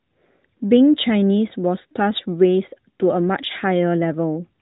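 This clip is speech, and nothing is technically wrong with it.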